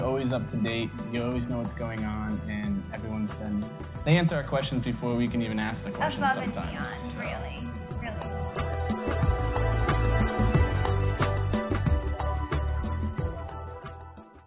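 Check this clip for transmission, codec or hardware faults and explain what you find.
No transmission, codec or hardware faults turn up anywhere in the clip.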